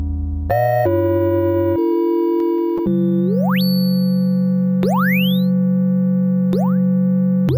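Throughout, imaging from sample-and-hold upsampling, 16 to 48 kHz: unfiltered repeated samples mirror the band into 8–16 kHz at about −26 dB, a metallic fizz tracking the sound rather than steady hiss.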